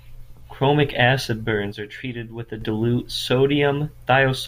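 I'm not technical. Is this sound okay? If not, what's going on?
No. From about 1.73 to 2.61 seconds the speech suddenly gets noticeably quieter, then jumps back to normal. This is most likely one channel dropping out: the recording had a left and a right side, one side went missing for that stretch, and with only half the signal feeding what you hear, the level falls. What sets it apart from a full dropout is that the sound never goes silent. It just steps down and back up abruptly.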